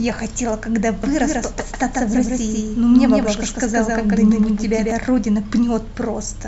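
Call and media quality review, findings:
Doubled audio track, 1.03–4.91 s: speech copy trailing by roughly 150 ms, a few dB quieter. No decay or room colour, abrupt onset and end, so not acoustic echo. Likely a second capture path.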